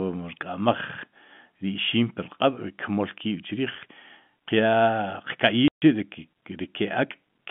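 At 5.68 s the speech cuts to silence for 140 ms, with hard edges. This is packet loss filled with silence, consistent with seven lost 20 ms packets.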